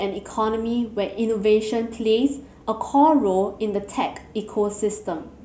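No technical faults can be heard anywhere in this recording.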